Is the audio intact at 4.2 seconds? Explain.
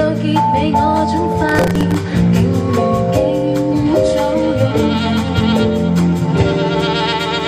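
Yes, the audio at 4.2 seconds is intact, with no dropout, click, distortion or other fault at that point.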